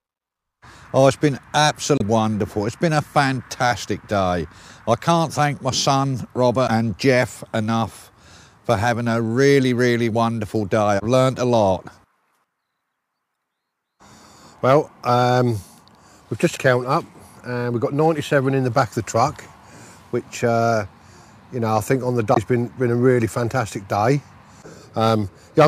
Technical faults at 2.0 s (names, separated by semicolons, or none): damaged data in a compressed stream